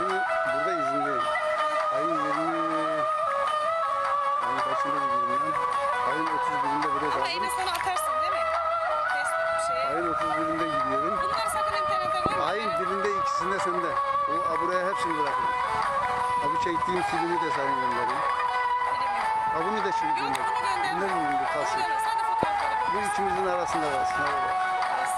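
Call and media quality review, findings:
Loud pop, single sharp transient at 12.26–12.28 s and again at 22.43–22.45 s, each about 15 dB above the signal, sound continuing underneath. Likely a voltage step from a plug, switch, static discharge or driver glitch, shaped into a brief thump.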